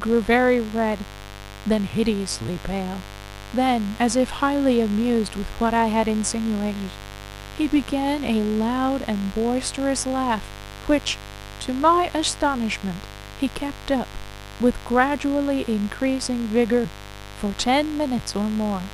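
From start to finish the speech sits over a mains buzz tied to a 50 Hz supply, fairly prominent at roughly 15 dB below the speech. Sharp switching spikes, of the kind a dimmer, rectifier or unshielded cable lets in, arrive twice per cycle, so the buzz repeats 100 times a second with harmonics reaching several kHz. This gives it a steady, raspy edge, unlike a plain hum, which stays a smooth, low, near-pure tone.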